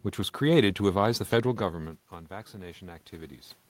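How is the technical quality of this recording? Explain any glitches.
The recording has one glitch: automatic gain rising. From 1.4 to 3.42 s, the automatic gain control responds to the input dropping by about 16 dB, as the talker moves back from the microphone around 1.5 s, and slowly lifts its gain by about 4 dB. Voice and room noise swell together, so the waveform envelope and the spectrogram's noise floor brighten gradually across all frequencies.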